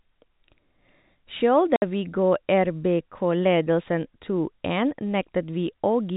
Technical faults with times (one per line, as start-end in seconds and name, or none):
1.76-1.82 packet loss filled with silence